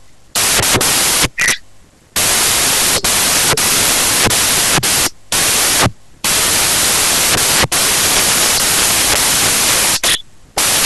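From start to end, samples built from the wrong bytes turn the speech into loud white noise, unlike added hiss, which stays steady regardless.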